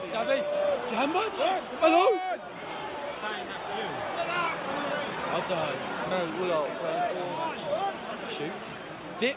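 No technical faults can be heard anywhere in the audio. It has come through a working call path, and nothing reaches above 4 kHz, a narrowband ceiling that fits a G.711 A-law codec at 64 kbps.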